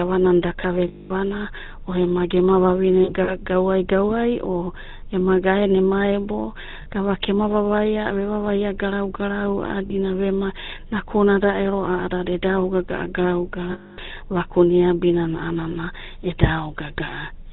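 Throughout, the speech passes through the GSM full-rate codec at what sounds like 13 kbps, with nothing above 4 kHz and a plainly buzzy, gravelly roughness. Lost GSM frames, concealed by repeating and fading the last good frame, ring metallically at 0.88–1.12 s, 3.04–3.31 s (scattered short gaps), 6.82–6.87 s, 9.86–9.95 s and 13.72–13.99 s.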